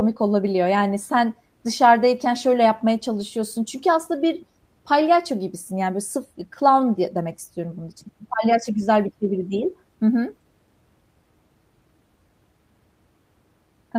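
A speech recording with one short stretch of lost packet rebuilt from error correction, from 3.15 to 3.21 s. For about 40 ms, which fits two separate 20 ms frames, the sound turns rougher and noisier without any gap, because the decoder played the low-bitrate copy carried by the following packet. Ordinary packet loss concealment would instead smear, buzz or fade the sound while guessing it.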